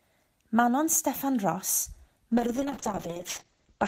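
At 2.33 s the speech goes rough and muffled, and it stays that way to the end. That's a call bitrate drop: the bandwidth estimate fell and the encoder got squeezed, which sounds like a fall from around 40 kbps to about 8 kbps. Coarser coding gives that watery grit, and the top end is chopped from 20 kHz down to 8 kHz. The worst stretch lasts about 1.1 s and never recovers before the clip ends.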